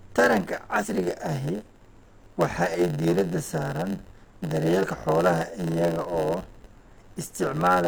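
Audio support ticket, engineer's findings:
Block size mismatch (padded), whole clip: steady buzz at 91.9 Hz; speech runs at 0.919x speed, pitch about normal. Buffer handoff between stages is zero-filling short blocks. Waveform shows regular flat gaps; spectrogram shows vertical striations every 10.9 ms.

Damaged data in a compressed stream, 0.79–0.86 s and 4.79–4.85 s (before "xoolaha iyaga oo"): brief chirp, squawk, click or short hole. Decoder is misreading corrupted frames, then resyncing on the next header. Waveform shows an abrupt discontinuity.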